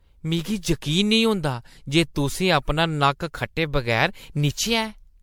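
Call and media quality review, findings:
Generation loss, throughout. Swirly, hollow speech, smeared consonant onsets, more degraded than a single 96 kbit/s MP3 pass would sound. Likely cause: repeated MP3 decode/re-encode, around seven passes, each requantising on a shifted frame grid. Spectrogram shows patchy, flickering holes and noise smear below a 19.9 kHz ceiling. Waveform transients look softened.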